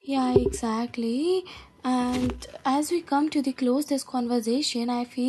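No technical faults can be heard anywhere in the speech recording. Nothing in the signal calls for a time stamp or a closer look.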